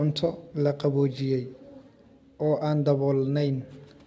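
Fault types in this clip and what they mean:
No faults in the speech; the call path behaves as designed, with nothing above 8 kHz, which fits a wideband codec such as G.722.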